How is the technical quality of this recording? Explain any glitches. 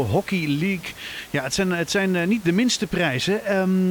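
No technical faults are audible.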